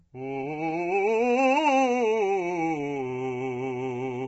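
Throughout the music, a low-delay AAC compression stage, likely AAC-ELD at a bitrate that sounds near 16 kbps, has too few bits to code the harmonics cleanly. The result is heavy roughness, grainy noise between tones, and nothing above 7.8 kHz.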